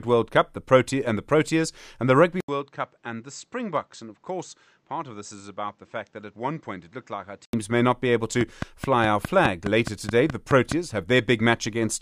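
Speech that, from 2.40 s to 7.53 s, sounds as if the input was switched to a poorer device, most likely another microphone or a headset's call profile. An 80 ms silence marks the switch, nothing above 8.1 kHz gets through, the level drops by roughly 10 dB, and a new background noise sits around 40 dB below the voice. That combination of a gap, a changed noise floor and a level shift sets it apart from a simple low-pass filter or EQ change, which would dull the sound without altering the noise or leaving a gap. Full bandwidth returns just before "may not be able". After those words, from 8.41 s to 10.73 s, a train of clicks runs at a regular 4.77 per second, about ten in all, each peaking around 10 dB above the speech. They are alike in shape, evenly spaced and continue through pauses, which separates them from random crackle or codec dropouts and points to a likely cause in interference from nearby equipment or a faulty connection or power supply.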